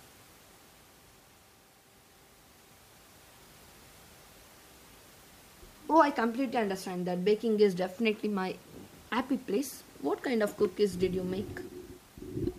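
Nothing stood out on listening to this speech; the only thing in the background is the room's own noise, sitting about 26 dB below the speech.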